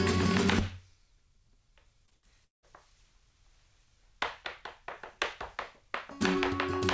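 From 2.06 to 2.65 s there is repeated packet loss, heard as robotic sound. The audio breaks up into four holes in quick succession. The longest hole lasts 179 ms. Each gap is papered over by stretching out the last sound received. So about half of this span is filler, not real audio. The result is choppy, with pieces missing. The band tops out at 8 kHz throughout, which fits a wideband call codec like G.722.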